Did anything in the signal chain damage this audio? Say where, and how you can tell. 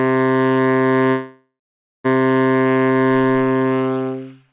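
Yes. From 1.1 to 2.06 s the sound fades into a buzz or hiss and then silence before resuming intact. This is a call audio freeze, likely from delayed network packets draining the jitter buffer.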